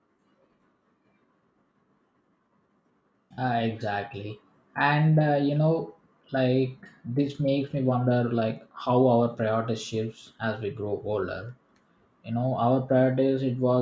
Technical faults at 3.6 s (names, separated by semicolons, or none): none